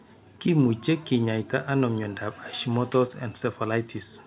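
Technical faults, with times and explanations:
Throughout: clock drift between sender and receiver. The far end's clock seems to run roughly 5 percent fast, so the jitter buffer keeps filling up and the receiver has to throw away small slices to keep up. That's why the timing never quite settles.
0.38 to 4.12 s: repeated timing corrections. Here the receiver is trimming short pieces over and over, all in the same direction but at uneven gaps, to follow a sender running at about 105 percent speed. Each edit is small, and it all sits on top of a call path that has nothing above 4 kHz, which fits a G.711-style narrowband codec.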